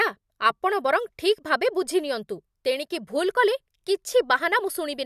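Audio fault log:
No faults detected in this speech clip.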